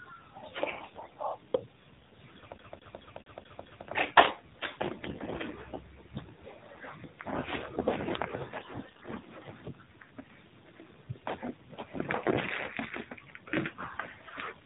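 The whole speech clip passed through the AMR narrowband mobile codec at a low bitrate, with a sound that fits the 7.4 kbps mode. Nothing above 4 kHz survives, and the sparse pulse model leaves the voice plainly buzzy and synthetic from start to finish.

Then come three bursts of AMR bit errors, at 0.66 to 1.14 s, 5.02 to 5.45 s and 8.58 to 9.32 s. Flipped bits in the weakly protected parts of each frame misplace the excitation pulses and skew pitch, gain and spectrum detail. The voice holds its pitch and level but turns hoarse, scratchy and gargly, most heavily in the second and third bursts.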